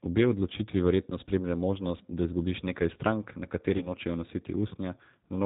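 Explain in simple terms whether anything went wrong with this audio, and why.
Yes, two things went wrong. First, the whole recording passed through the G.729 codec, a phone-call compression system that rebuilds the voice from a rough model of the throat and a handful of pulses. Everything above 4 kHz is cut, so the speech sounds muffled, slightly rough and synthetic throughout.

Second, there was VoIP packet loss concealed by the speech codec. Right after "da izgubiš nekaj strank", about 40 ms of audio went missing in transit. The decoder filled the gap from 3.77 to 3.91 s by stretching the last sound into a fading buzzy tone or coloured noise, and the voice stays weak briefly afterwards.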